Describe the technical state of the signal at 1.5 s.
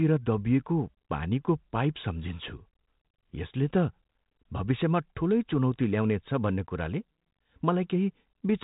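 At 1.5 s the audio is intact, with the speech passing normally through the G.726 ADPCM path at 32 kbit/s and its usual band limit near 3.8 kHz.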